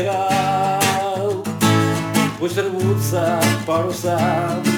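Nothing in the audio sounds wrong at any point, so there's no technical fault to point to here.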